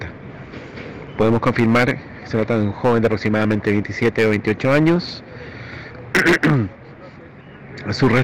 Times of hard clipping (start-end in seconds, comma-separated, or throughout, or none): 1.20-1.91, 2.34-4.96, 6.15-6.60, 8.02-8.22